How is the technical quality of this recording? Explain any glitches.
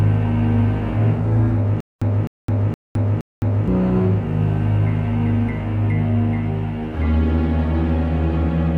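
The recording has one clear glitch: a stutter with silent gaps from 1.80 to 3.68 s. A burst of about 256 ms plays four times, each followed by roughly 212 ms of dead silence, so it repeats every 468 ms. The likely cause is a stalled player or stream that replayed its last fragment on each retry before running dry, losing the audio meant for that stretch. On a waveform it shows as identical blocks separated by flat silent gaps; a spectrogram shows repeated, matching vertical slices with blank columns between.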